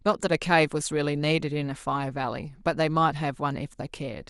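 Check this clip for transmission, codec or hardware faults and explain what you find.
No faults can be heard.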